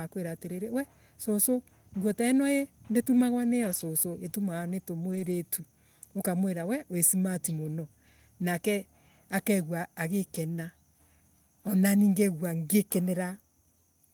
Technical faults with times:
2.11-2.13 lost packet rebuilt from error correction
3.63-3.81 lost packet rebuilt from error correction
5.11-5.33 lost packet rebuilt from error correction

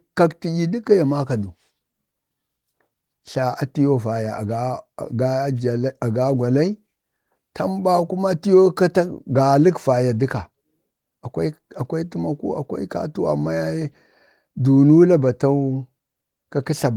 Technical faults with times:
none

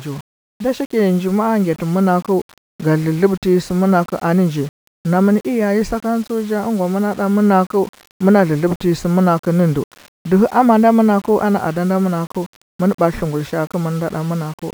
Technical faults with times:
0.00-14.73 low bit depth without dither

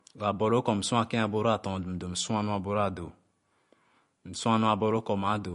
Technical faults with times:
0.00-5.55 MP3 compression

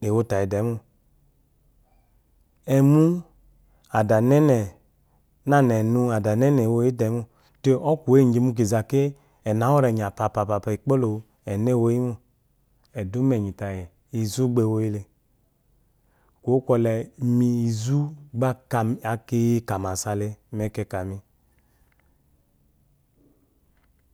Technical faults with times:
none

